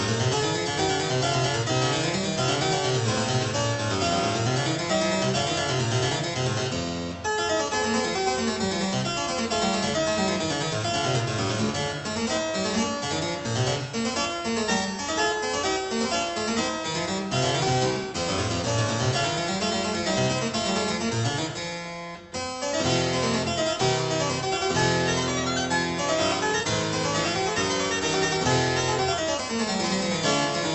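Nothing in this audio points to a technical problem. It has passed through a WebRTC call path whose codec, which sounds like Opus, limits the top end to about 8 kHz and adds its usual coding texture.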